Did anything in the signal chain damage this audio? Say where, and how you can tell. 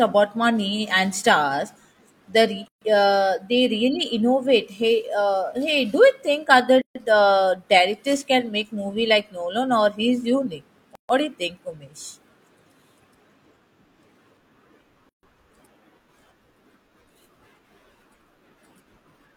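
Yes. At the codec stage, separately encoded pieces were joined untrimmed, so each encoder's start-up delay and last-frame padding remain. Each gap at a join of encoded pieces cuts a 134 to 139 ms gap into the speech at 2.68, 6.82, 10.95 and 15.09 s, every 4 s, with smeared edges, before it resumes where it stopped.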